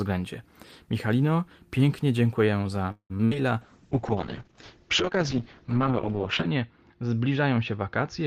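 Right after "pięknie dziękuję za", from 2.91 to 3.12 s, the sound stalls: the last sound is stretched out and then drops to silence for about 80 ms before carrying on. This is a call audio freeze, likely from delayed packets draining the jitter buffer. About 183 ms of gap was inserted and nothing was lost.

From 3.18 to 3.21 s comes a brief smear. This is short concealed packet loss: 20 ms of audio never reached the decoder in time, and the receiver papered over the hole with about 10 ms of continued sound before blending back.

From 3.25 to 3.33 s, a burst of packet loss leaves a held, fading continuation of about 64 ms in place of roughly 60 ms of real audio. The receiver extended the last sound while turning it down, then resumed further along with that stretch missing.

From 3.62 s to the end the speech turns coarse and muffled. This is a call bitrate drop: the encoder went from 32 to 7 kbps, spending about 2.85 s at the lowest rate, and the bandwidth narrowed from 20 kHz to 8 kHz. 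It does not recover before the clip ends.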